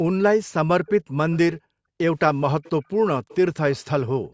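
From 0.86 to 1.38 s a faint copy of the speech trails the original by about 0.49 s, most likely an echo leak from a far-end loudspeaker that the echo canceller did not fully remove. It returns, quieter, at 2.63 to 2.7 s and again from 3.29 to 3.81 s, always at that same fixed lag, which separates it from room reverberation. Between 1.0 and 1.98 s the background is gated by the echo canceller: the room sound drops by up to about 40 dB and then returns. Similar dips follow at 2.82 to 2.96 s, about 31 dB deep, and from 4.09 s to the end, about 17 dB deep.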